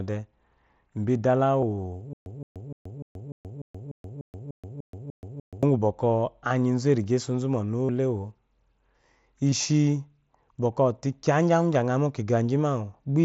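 At 1.61 s there's a tiny concealed Bluetooth headset packet loss: about 15 ms of voice packets went missing between headset and phone, and the receiver patched the hole by repeating the best-matching bit of recent waveform, so it's nearly inaudible.

From 2.13 to 5.63 s comes a stutter with silent gaps. The same 168 ms burst plays again 12 times, once every 297 ms or so, with about 129 ms of dead digital silence between. That's likely a stalled stream retrying, and whatever should have played there is simply gone.

After that, the packet-loss concealment shows up again at 5.80 s, from 7.86 to 7.89 s, and at 9.51 s. The middle one, at roughly 38 ms, is long enough to give a brief buzzy, held tone with a slight warble as real audio picks back up.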